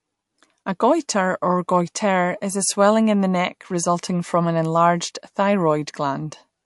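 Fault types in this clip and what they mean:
MP3 compression: Likely an MP3 encoder short of bits, at a rate fitting about 53 kbps, which removes everything above 11.3 kHz and switches weak frequency detail on and off between frames. The speech loses its top-end air and takes on a plainly audible watery, swirling texture.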